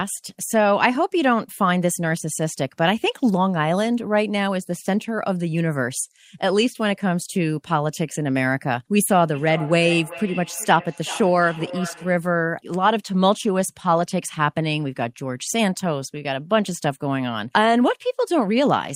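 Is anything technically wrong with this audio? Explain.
Yes. From 9.1 to 12.3 s the speech has a feedback echo between two devices. Two devices in the same room share the call. One plays back the other's microphone signal, and that microphone picks it up again. Each device's echo canceller suppresses only its own playback, so the loop goes uncorrected. The sound returns roughly every 0.4 s, thinner and more ringing, peaking at about 14 dB below the speech.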